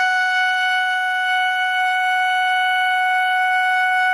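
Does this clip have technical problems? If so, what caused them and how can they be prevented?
Yes. Throughout the music, the upper range turns grainy and breathy, with a hissy, smeared shimmer where detail should be. This is likely Bluetooth LC3 compression: at a starved bitrate around 32 kbps with 10 ms frames, the codec discards much of the high spectrum and fills it with noise, and nothing remains above about 20.1 kHz. To prevent it, stream at a higher LC3 bitrate or record over a wired connection.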